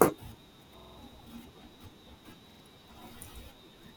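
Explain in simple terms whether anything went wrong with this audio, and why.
Two stutters from a repeated buffer: at 0.79 to 0.98 s, one 46 ms slice of speech plays four extra times, and at 2.51 to 2.60 s twice more, which fits a 2048-sample buffer. Unlike a dropout's silence, the same sound repeats while roughly 200 ms and 100 ms of speech go missing.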